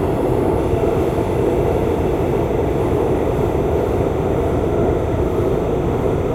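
Linear timecode leaks from a nearby track from 0.58 s onward. This timecode bleed adds a faint chirping warble near 1 and 2 kHz, roughly 30 dB down.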